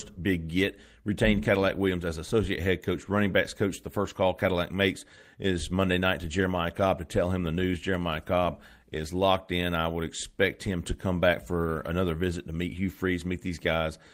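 No audible faults occur anywhere in the recording, so there is nothing to place on the timeline.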